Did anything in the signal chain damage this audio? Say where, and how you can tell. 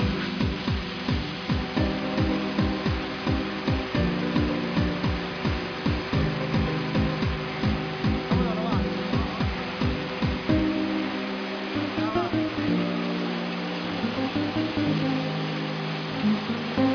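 No, nothing along the chain seems to have damaged this one, and there's nothing in the sound to trace back to any stage.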